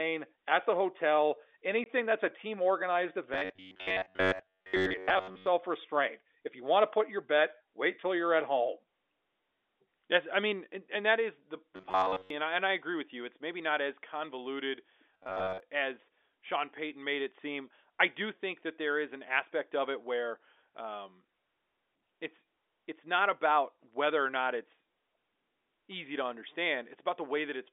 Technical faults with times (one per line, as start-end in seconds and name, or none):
1.84-1.86 packet loss filled with silence
3.34-5.48 robotic sound from repeated short buffers
11.76-12.30 robotic sound from repeated short buffers
15.14-15.60 robotic sound from repeated short buffers